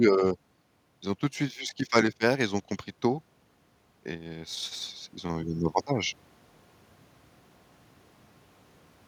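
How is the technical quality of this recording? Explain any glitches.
There is one glitch, an automatic gain rising between 3.9 and 5.88 s. The gain control judged the input too quiet and raised its gain by about 6 dB over those two seconds, so speech and background swell together. On a waveform the envelope widens steadily; a spectrogram brightens across all frequencies at once.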